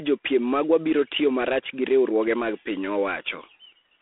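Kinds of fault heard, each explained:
G.726 ADPCM: The speech carries a harsh, rasping hiss that rises and falls with its level, and nothing survives above about 3.8 kHz within a narrow telephone band of 300 Hz to 3.5 kHz. This fits a 24 kbit/s adaptive prediction coder with too few bits for each sample.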